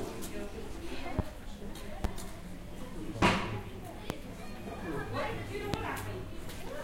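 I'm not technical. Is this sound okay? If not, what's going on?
No. There are five loud pops, at 1.19–1.22, 2.04–2.08, 3.23–3.26, 4.10–4.13 and 5.74–5.77 seconds. Each is a single sharp snap, far louder than the sound around it, which carries on underneath. The likely cause is electrical spikes, from something like a loose plug, a switch or static.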